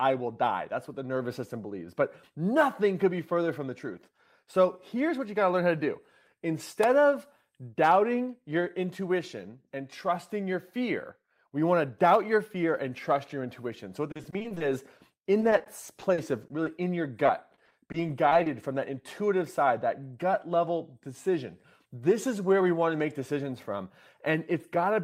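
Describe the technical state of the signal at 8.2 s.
At 8.2 s the speech signal is intact, with no audible fault at that moment.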